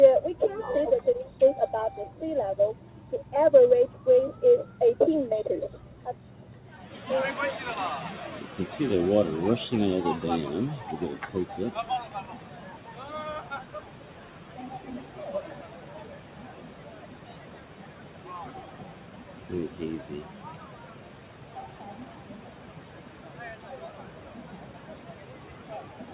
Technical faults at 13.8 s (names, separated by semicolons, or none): noise suppressor applied to music or sounds